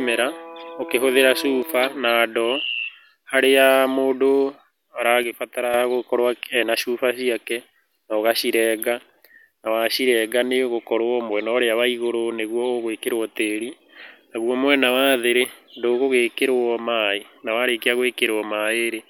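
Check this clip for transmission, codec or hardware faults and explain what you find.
Two brief faults are present, both one channel dropping out. At 1.63–1.69 s, before "na ndoo", and 5.23–5.74 s, before "gũkorwo ena cuba ciake", the speech level drops abruptly by about 6 dB, likely because one stereo channel was lost before the mono sum.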